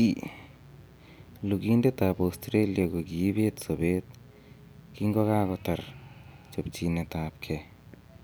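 From start to finish the speech sits on a mains buzz, a raspy, steady drone built on 60 Hz. Something like a dimmer or rectifier is throwing sharp spikes into the line, so harmonics stack up well into the kilohertz range, roughly 30 dB under the speech.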